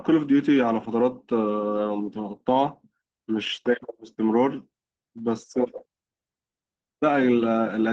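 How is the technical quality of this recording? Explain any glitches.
The recording has two brief glitches from lost packets rebuilt from error correction, heard through an Opus call path limited to about 12 kHz.

Lost packet rebuilt from error correction, from 1.75 to 1.85 s and again at 2.67 s: packets went missing, and the decoder filled each hole from the lower-quality backup copy carried in the following packet. The first patch spans roughly 60 ms, consistent with three separate losses, and the second about 20 ms, pointing to one. There is no silence, but those moments sound briefly rougher and noisier.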